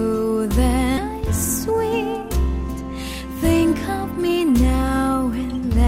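At 0.97 to 0.99 s the audio makes a skip ahead: nearly half a second is dropped and the two sides are butted together, leaving an abrupt seam with no gap on the waveform.

A jitter buffer speed-up follows at 1.68 to 2.37 s (118%), 2.91 to 3.62 s (105%) and 4.07 to 4.40 s (111%), as short pitch-period slices are removed to cut excess buffered delay. The sound runs hurried at unchanged pitch, and the spectrogram shows harmonics at steady height but compressed in time.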